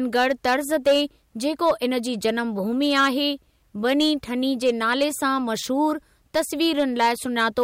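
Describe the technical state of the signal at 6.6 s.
At 6.6 s the speech is still going through a stage that is overdriven by about 7 dB, so hard clipping flattens its peaks, as it does throughout the clip. Only a small share of samples is cut, but the squared-off tops add high harmonics, heard as crackle on the louder moments.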